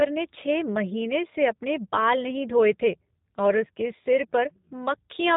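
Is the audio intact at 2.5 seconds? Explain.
No. At 2.5 s, as throughout the clip, the speech carries G.729 codec damage. It is rebuilt from a vocal tract filter, a pitch predictor and a few pulses per 10 ms frame, which fits an 8 kbit/s coder. Nothing above 3.8 kHz survives, and the voice sounds plainly rough and synthetic. Simple low-pass filtering would dull the voice without that buzzy, resynthesised grain.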